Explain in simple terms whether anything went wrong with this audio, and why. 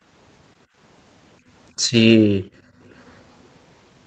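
Two problems can be heard in this speech. First, background gated by the echo canceller: the room sound drops away at 0.66–0.77 s, 1.72–1.92 s and most deeply at 2.27–2.83 s. Second, an echo leak: from 2.90 to 3.18 s a very faint copy of the speech arrives about 0.32 s late, likely because the loudspeaker sound was not fully removed.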